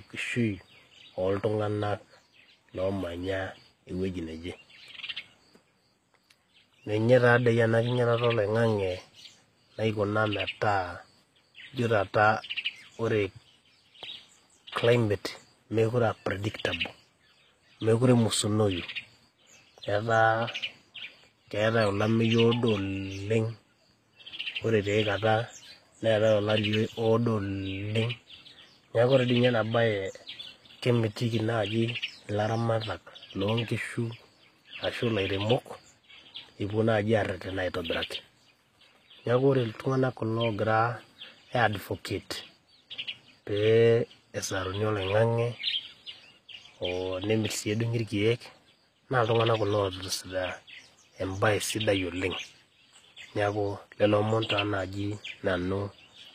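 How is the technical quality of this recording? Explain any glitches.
The recording carries one clear, persistent flaw across the whole speech clip. HE-AAC compression, from start to finish: the sound is likely passed through HE-AAC at a low bitrate, consistent with about 24 kbps. Only the lower spectrum is truly coded, and the treble is rebuilt by copying lower bands upward, so harmonics mismatch above the crossover and s sounds come out gritty, metallic and lispy.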